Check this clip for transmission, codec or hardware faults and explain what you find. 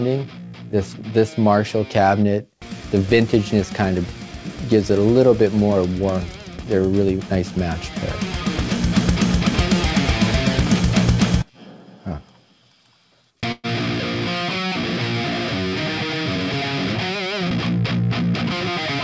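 One transmission fault is audible, a call audio freeze at 13.52 to 13.67 s. The band is limited to about 8 kHz, consistent with a G.722 call path. During the freeze, the sound hangs as a fading buzz for about 0.12 s, then a brief silence, and resumes where it left off. The likely cause is delayed packets draining the jitter buffer, so the gap adds delay without losing audio.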